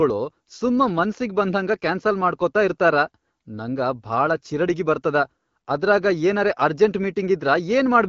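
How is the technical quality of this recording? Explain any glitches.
No glitches turn up anywhere in the recording. The speech comes through the AMR wideband (HD Voice) codec at 12.65 kbit/s, a rate that keeps it clear, with only the light coding texture that rate leaves and the top band above 6.4 kHz filled in by shaped noise.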